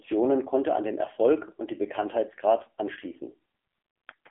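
From start to finish the speech carries the AMR narrowband mobile codec sound of a mobile call. The audio is confined to a telephone band of roughly 250 Hz to 3.4 kHz, with nothing above 3.5 kHz, so it sounds thin and boxed in. The codec damage is heavy. Speech is rebuilt from a vocal-tract model excited by sparse pulses, which gives a buzzy, synthetic quality that fits a low mode around 6.7 kbps.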